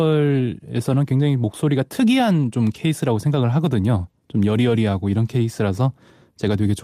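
A speech recording with one brief flaw. From 2.69 s to 2.75 s, about 40 ms of audio turns rougher and noisier. There is no dropout or silence. This is a lost packet rebuilt from error correction. Packets went missing in transit, and the decoder filled the hole with a low-bitrate copy carried inside the following packet. The 40 ms span fits two separate 20 ms packets being replaced this way.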